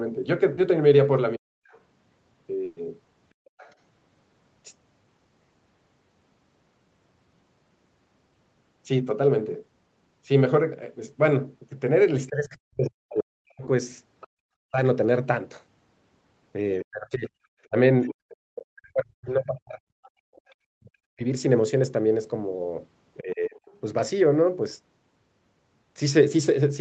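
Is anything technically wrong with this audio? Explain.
Yes. This is speech from a call, and it carries several faults from network loss and echo cancellation.

Short concealed packet loss, 0.55 to 0.59 s: there is a brief smear where the sound is stretched rather than continued naturally. About 20 ms of audio never arrived in time. The receiver filled the hole by extending what it had just played, then crossfaded back into the real signal. The result is a tiny wobble rather than an outright gap.

Speech suppressed in double talk, 1.36 to 1.66 s and again across 12.28 to 23.56 s: the talker's level sinks, at its worst by roughly 40 dB, and drops out in pieces. The first dip lasts about a third of a second. The later stretch adds up to around four seconds of lost level scattered through that span. The likely cause is the echo canceller failing to tell the near talker from loudspeaker echo while both sides spoke, so it pulled everything down.

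Other side's voice leaking through: a faint second voice sits beneath the talker from 1.70 to 3.74 s, 13.18 to 14.27 s, 17.63 to 20.55 s, and briefly at 23.65 to 23.78 s. It is roughly 20 to 35 dB below the main speech, and is most audible in the 17.63 s stretch. It most likely comes from the far end's loudspeaker playback reaching the microphone, with the canceller not removing all of it.

Burst of packet loss, 2.65 to 2.79 s: the sound freezes into a held, fading texture for 120 ms, then jumps ahead. A run of packets was lost or arrived too late. The decoder kept extending the last sound and lowered it as the gap went on. When real audio resumed, the content from that interval was simply missing.

Background gated by the echo canceller, 3.34 to 3.56 s, 14.27 to 14.36 s and 20.15 to 20.26 s: the room tone drops away abruptly, by about 30, 33 and 28 dB respectively, for a fifth of a second or less, and then returns. 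While loudspeaker playback was active, the canceller clamped the microphone hard, and the ambience vanished with it until the canceller released.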